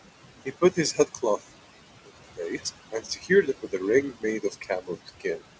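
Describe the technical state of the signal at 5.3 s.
At 5.3 s the speech is being cut by the noise suppressor. The fault runs from 5.06 to 5.40 s. Within that span the suppressor mistakes parts of the speech for background noise and pulls them down with it. The deepest drop is about 15 dB. The affected pieces add up to about a tenth of a second. They sound swallowed and faint.

Noise suppressor artifacts are also present at this moment, as they are across the whole clip. The suppressor lowers the bands it judges to be steady noise by about 16 dB, frame by frame. The room noise, about 14 dB below the speech, sinks in the gaps and rises under the speech. Nothing is heard above 8 kHz, which fits the G.722 call codec.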